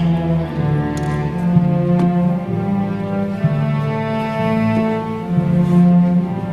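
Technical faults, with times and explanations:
No technical faults are audible anywhere in this recording.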